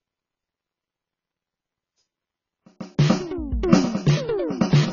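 A music clip with heavy AAC compression throughout. Nothing is heard above 7 kHz, so the sound is dull. Sustained sounds warble and smear with a fizzy texture. The likely cause is AAC-LC at a very low bitrate, which fits around 16 kbps.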